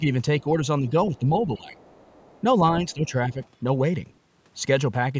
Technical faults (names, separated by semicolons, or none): speech suppressed in double talk; other side's voice leaking through